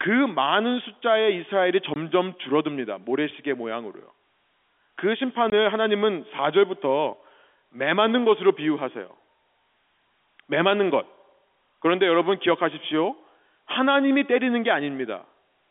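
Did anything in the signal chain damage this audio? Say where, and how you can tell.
Yes, packet loss filled with silence on the network path: hard-edged gaps at 1.94–1.96 s and 5.50–5.52 s, each 20 ms, fitting one dropped packet played as silence.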